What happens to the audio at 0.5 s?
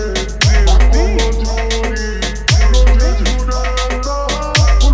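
At 0.5 s the audio is affected by a wrong sample rate. The fault runs through the whole clip, not just this moment. The samples are being played back slower than they were captured, with no rate conversion in between. Everything runs at about 0.73 times normal speed and sits about 5.6 semitones low. The sound is dragged out and deepened together. That ratio fits material recorded near 22 kHz being played at 16 kHz.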